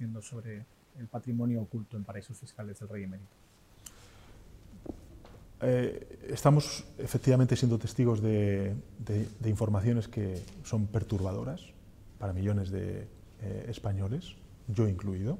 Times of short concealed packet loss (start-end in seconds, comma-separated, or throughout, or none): none